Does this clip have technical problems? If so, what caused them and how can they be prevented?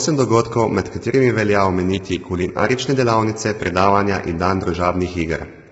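Yes. The speech is rough and grainy throughout, with noise filling the gaps between harmonics. Nothing comes through above 7.8 kHz. The likely cause is heavy low-delay AAC compression (AAC-ELD), whose short frames resolve pitch poorly, at what sounds like about 16 kbps. Raising the call's bitrate would prevent it.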